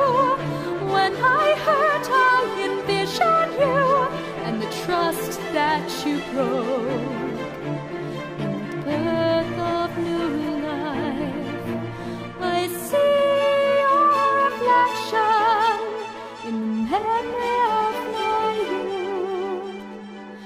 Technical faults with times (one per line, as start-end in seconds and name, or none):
8.72 bit error spike